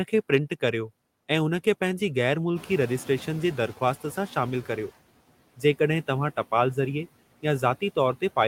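Noise suppressor artifacts run through the whole clip. The suppressor pulls down every band it judges to be steady noise by about 18 dB, frame by frame, so the background sinks between words and swells back beneath the speech.

From 2.55 s to 4.86 s the noise suppressor is catching up. The room noise jumps by about 12 dB around two and a half seconds, and the suppressor's noise estimate lags, cutting only about 9 dB at first. The louder noise breaks through, then sinks over 2.31 s as the estimate adapts.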